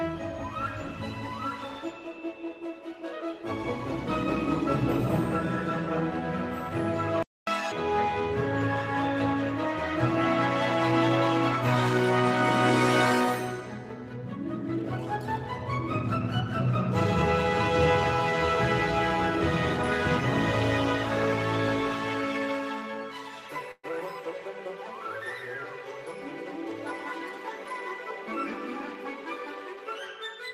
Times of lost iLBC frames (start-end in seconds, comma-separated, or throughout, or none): none